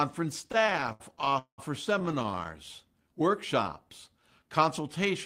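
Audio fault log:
0.41–1.60 s, repeated stalls (stutter): The sound catches and hangs 22 times as the jitter buffer keeps running dry. The receiver stretches the last sound over each wait, fading it in the longest (193 ms). About 41% of the stretch is filler, so it drags, but nothing is lost. Unlike a slow-down, it halts in jerks.
2.00–2.47 s, repeated stalls (stutter): A second, tighter burst of 14 short hangs, none longer than 17 ms, fills 146 ms of this span, about 31% of it. Again nothing goes missing.
3.03–4.66 s, jitter buffer slow-down: This passage runs smoothly at 92% speed with 133 ms added and the pitch unchanged. The receiver is repeating single pitch periods or bits of pauses to rebuild its reserve, which draws sounds out. There are no hangs or stops, which sets it apart from the stutter earlier.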